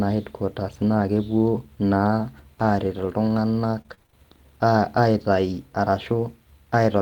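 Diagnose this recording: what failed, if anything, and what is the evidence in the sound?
The network stage dropped packets, and the codec rebuilt them through its error correction, producing lost packet rebuilt from error correction. The evidence is brief rough, noisy patches with no audible gap, from 0.97 to 1.03 s and from 5.52 to 5.54 s. These spans fit two separate lost 20 ms packets and then a single one. Each missing frame was replaced by the low-bitrate copy carried in the following packet, so the sound continues but coarser for those 40 ms and 20 ms.

Between 3.77 and 4.14 s the network stage failed repeatedly, producing repeated packet loss (robotic sound). The sound turns choppy and robotic across seven separate gaps, the longest 29 ms. The decoder stretched the preceding sound over 149 ms of holes, concealing about 40 percent of the span. Another 140 ms is simply absent, and around 40 ms came back from redundancy. 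Each hole is patched by extending the last sound, then the next loss arrives almost immediately.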